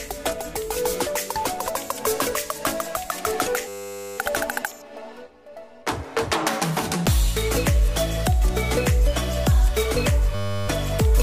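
The system froze while the hardware replayed one 10 ms buffer, a system hang loop, at 3.68–4.18 s and 10.35–10.68 s, each heard as a steady 100 Hz buzz.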